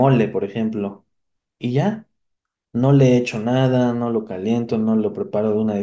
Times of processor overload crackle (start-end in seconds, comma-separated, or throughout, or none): none